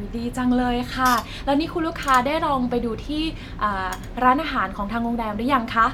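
A short speech recording with no audible technical faults: the signal holds steady throughout, with nothing breaking into or disturbing it at any point.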